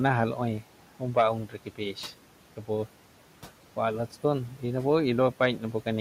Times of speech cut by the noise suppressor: 1.46-1.95

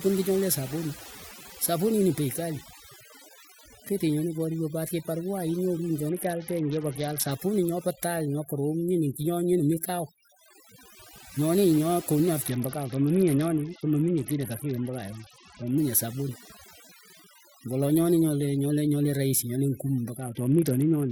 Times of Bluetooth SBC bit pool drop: 6.09-7.31, 12.47-15.78, 20.18-21.11

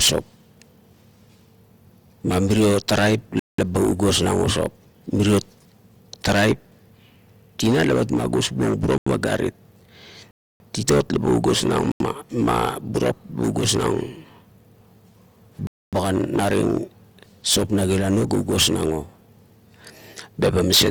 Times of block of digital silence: 3.39-3.58, 8.98-9.06, 10.31-10.60, 11.92-12.00, 15.67-15.93

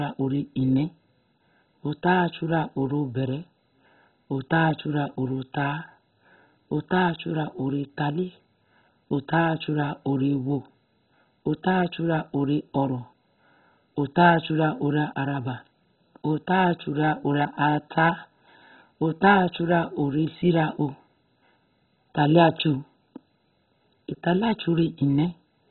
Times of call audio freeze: none

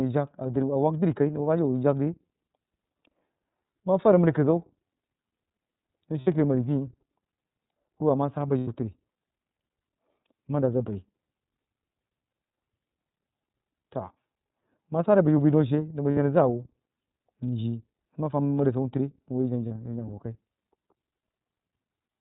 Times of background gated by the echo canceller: none

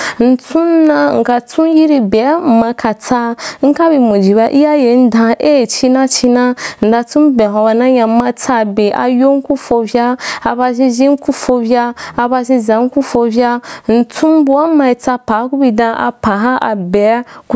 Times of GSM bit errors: none

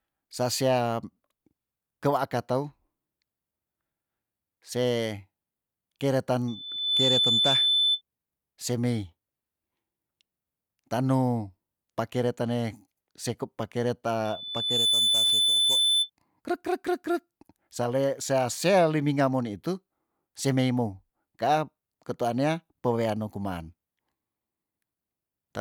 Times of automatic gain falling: none

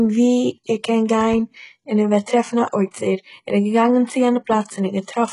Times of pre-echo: 2.91-2.94

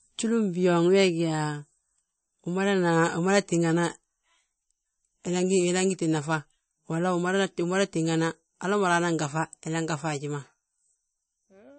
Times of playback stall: none

